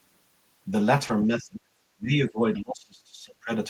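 At 1.07 to 1.11 s a brief smear interrupts the speech, a short stretch where the sound seems to carry on artificially before rejoining. This is short concealed packet loss: about 20 ms of audio arrived too late, and the receiver extended the preceding sound to fill the gap before blending back.

From 1.27 to 1.68 s, and again from 1.96 to 3.5 s, the speech dips sharply and thins, falling by roughly 30 dB at its deepest before recovering. The likely cause is speech suppressed in double talk, where an echo canceller, unable to separate the talker from loudspeaker echo, attenuated both.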